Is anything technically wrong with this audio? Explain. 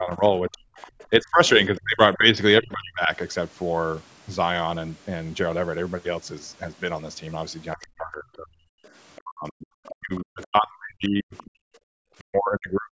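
Yes. The clip has three echo-related faults, all tied to the call's echo canceller.

Speech suppressed in double talk, from 0.0 to 3.1 s and from 7.75 s to the end: the talker's speech dips and breaks up, by around 30 dB in the first stretch and around 40 dB in the second. The total loss is roughly 1.5 s and 3 s respectively. This is likely the canceller failing to separate the near talker from loudspeaker echo while both sides spoke, so it attenuated everything.

Other side's voice leaking through, at 0.77 to 2.17 s, 7.82 to 7.87 s, 8.84 to 9.95 s and 11.35 to 11.5 s: a second, faint voice sits some 20 to 30 dB below the main speech. It is likely residual loudspeaker echo that the canceller left in the microphone signal. It comes through as brief scraps at 7.82 s and 11.35 s and as longer passages elsewhere.

Background gated by the echo canceller, from 11.62 to 11.92 s: the room sound drops by about 40 dB for roughly a third of a second, then returns. 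The canceller clamped the microphone hard while the loudspeaker was active and released it afterwards, leaving a brief hole in the ambience.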